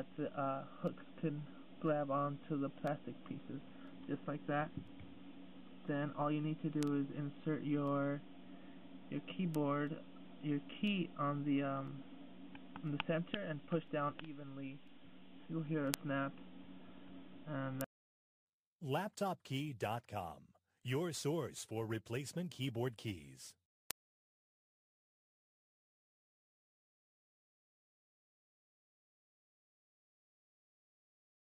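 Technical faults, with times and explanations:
6.83, 9.55, 15.94, 17.81 and 23.91 s: bit error spikes, where a flipped bit makes a sample or a few jump and snap back, each giving one sharp broadband tick at about -20 to -8 dBFS.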